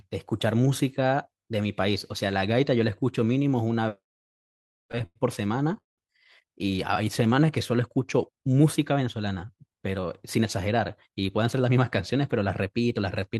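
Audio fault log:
3.95–5.17 s, repeated stalls (stutter): The speech catches and drags ten times in just over a second, each hitch stretching the last sound before moving on. The longest hold is 95 ms, and together they add 240 ms, about a fifth of that stretch. Packets kept arriving late, so the jitter buffer repeatedly ran dry and the receiver filled each wait by continuing the sound it had. Nothing is lost; the delay is inserted.
5.80–6.00 s, call audio freeze: The sound hangs for 178 ms. A brief carried-over tail fades into about 150 ms of silence, then the speech resumes where it left off, with nothing skipped. This is likely a call audio freeze: packets held up in transit emptied the jitter buffer, the receiver extended and faded the last sound, and the playout delay grew by 178 ms once audio returned.
7.04–7.76 s, jitter buffer slow-down: The speech drawls at 93% speed with its pitch unchanged, and sounds are drawn out slightly. 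The receiver was building a reserve in a low jitter buffer by repeating single pitch periods and slivers of pauses many times in a row. That added 62 ms across the passage, stretching the timing rather than lowering the pitch.
9.67–12.13 s, jitter buffer speed-up: The speech sounds hurried, running at 106% speed for nearly two and a half seconds with the pitch held steady. The jitter buffer had gathered more audio than its target, so the receiver trimmed short chunks of one or a few pitch periods again and again to reduce the delay. About 150 ms was removed in total, which tightens the rhythm without a pitch shift.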